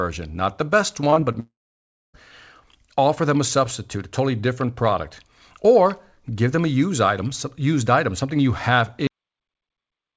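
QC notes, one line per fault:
1.10–1.36 s repeated packet loss (robotic sound): right after "not the best", four short gaps (longest 21 ms) are patched by repeating sound, leaving choppy audio with pieces missing, unlike one sustained hole.
1.40–2.16 s long network dropout: 0.74 s of audio is lost; a brief fading continuation gives way to 0.62 s of silence, likely because packets stopped arriving, and the audio then resumes.
9.07 s cut-off end: after "item something you have", the sound stops mid-sound into digital silence with no decay because the final buffers were never played. Unlike a dropout, it never returns.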